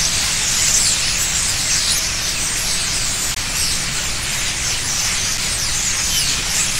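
At 3.35 to 3.37 s the audio drops into a block of digital silence lasting 20 ms, and at 5.38 s a second, 5 ms block follows. In each case a run of samples was replaced by zeros, so the waveform cuts to silence and back with no fade. The 20 ms block is heard as a brief hole, while the 5 ms block registers as a single tick.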